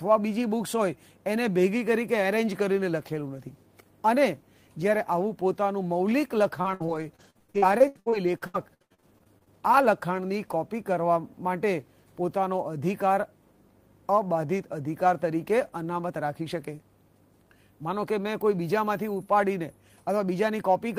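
From 6.61 to 9.48 s the sound turns choppy as short pieces drop out and smeared fragments take their place. This is repeated packet loss (robotic sound): 22 separate holes, the longest about 95 ms, were each patched by stretching the last good audio forward. Close to a third of that stretch is concealment rather than real signal, and roughly 0.4 s of it is only roughly rebuilt.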